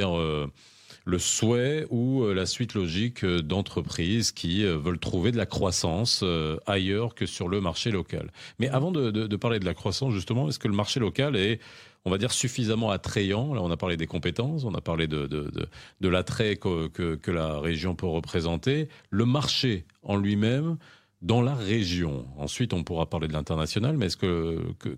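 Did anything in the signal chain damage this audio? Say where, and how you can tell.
Yes. Right after "mmh avant de parler", from 9.57 to 10.48 s, the speech slows by about 5.4% and drops roughly a semitone (96 cents), then snaps back. That's likely a drift correction step in the driver or buffer stage, where clock-matching software briefly retimed playback to rebalance its buffer.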